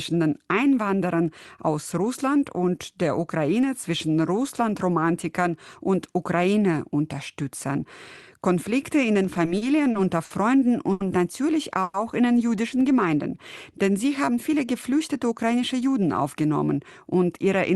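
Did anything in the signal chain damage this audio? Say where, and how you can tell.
Yes. Between 9.23 and 10.32 s the network delivered packets late and the jitter buffer ran dry six times, producing repeated stalls (stutter). The receiver held the last sound through each gap, the longest about 60 ms, about 150 ms in all, roughly 14% of that stretch, so the audio drags and stutters without losing anything.

At 10.92 to 11.02 s a single late packet caused a short stall. Network delay jumped by 80 ms, the buffer emptied, and the receiver stretched the preceding sound for 80 ms before resuming where it left off, so that sound is held audibly too long.

From 11.83 to 11.96 s there is a call audio freeze: the sound is continued as a held, fading buzz for about 110 ms, never dropping to silence, then picks up exactly where it stopped. The likely cause is a 110 ms rise in network delay that emptied the jitter buffer.

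From 14.04 to 15.99 s a jitter buffer speed-up is audible. Having built up excess audio, the buffer trimmed short pitch-period pieces, around 150 ms in total, so that passage runs at 107% speed with unchanged pitch and sounds hurried. This all sits on an Opus call path limited to 12 kHz, consistent with a 32 kbps setting.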